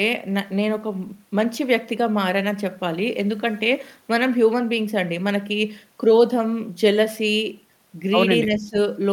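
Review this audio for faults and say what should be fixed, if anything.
From 8.45 to 8.77 s there is speech suppressed in double talk. The speech sinks by roughly 10 dB for about a third of a second, likely because the echo canceller treated overlapping far-end sound as echo and turned the near-end talker down with it. Unlike a packet-loss dropout, the speech stays present but quieter rather than cutting abruptly to silence or glitching. A double-talk detector that holds near-end gain while both sides are active would prevent it.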